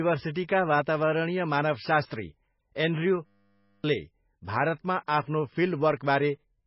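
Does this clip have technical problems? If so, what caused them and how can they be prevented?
Yes. Throughout, the speech sounds watery and swirly with nothing above 5.6 kHz, pointing to heavy, likely MP3 compression at a very low bitrate. Encode at a higher bitrate or keep an uncompressed copy.

From 3.26 to 3.84 s, a system hang loop replays one 10 ms piece of buffer over and over, giving a steady 100 Hz buzz and losing about half a second of audio. Prevent it by fixing the driver or system stall.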